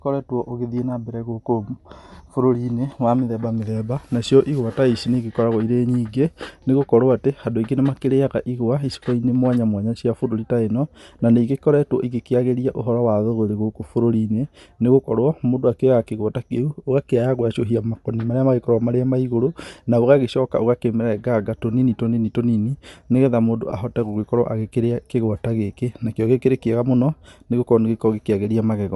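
From start to finish the speech carries a plainly audible breathy, grainy edge, with the upper range sounding thin and hissy rather than clean. This is likely Bluetooth LC3 compression: the codec rebuilds coarsely coded upper frequencies with noise, at a rate that fits about 48 kbps with 7.5 ms frames.

At 23.71 s there is a brief smeared, noisy blip. It comes from a single lost LE Audio frame: about 7.5 ms of audio never arrived, and the decoder filled the gap by reusing the previous spectrum with scrambled phase.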